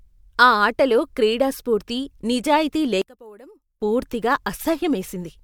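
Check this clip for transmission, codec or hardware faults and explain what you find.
One fault appears. From 3.02 to 3.82 s, right after "ఆటలో క్రీడా స్ఫూర్తి నిజాయితీ", the speech drops by about 24 dB to a faint residue. This is likely one channel inverted: summed to mono, the shared centre cancels. Unlike a dropout, a faint difference signal remains rather than silence.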